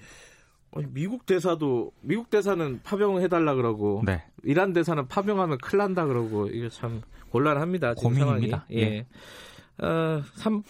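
Nothing goes wrong anywhere in this bit of speech, so there's no technical fault to point to.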